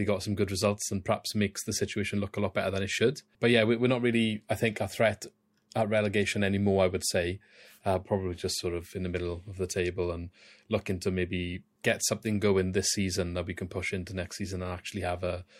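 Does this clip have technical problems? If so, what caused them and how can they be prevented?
No, there are no technical faults to hear in this speech recording. Nothing in it calls for a cause to track down or a fix to prevent.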